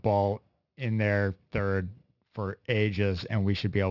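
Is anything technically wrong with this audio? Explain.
Yes. Throughout, there is aliasing: the speech was resampled without an anti-aliasing filter, consistent with a drop to 12 kHz. Content above 6 kHz folds back as gritty, metallic sibilants roughly 25 dB below the speech.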